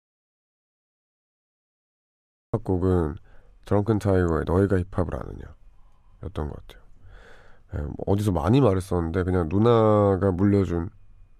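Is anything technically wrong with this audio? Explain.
Yes. From the very start until 2.54 s there is an audio dropout to silence: the speech enters mid-flow out of dead silence, with no room tone at all. That absence distinguishes it from a quiet pause or noise gate. The likely cause is a lost input while recording continued.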